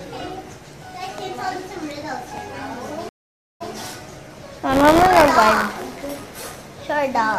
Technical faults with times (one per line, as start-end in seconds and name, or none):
3.09-3.72 stream reconnect
4.69-6.56 buffer tearing